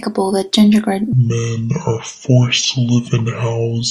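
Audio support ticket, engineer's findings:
Section at the wrong speed from 1.13 s to the end: speech suddenly drops deep and draggy, running at about 0.6x with pitch down roughly ten semitones, speed and pitch falling together. Likely a playback or resampling stage clocked wrong for that segment.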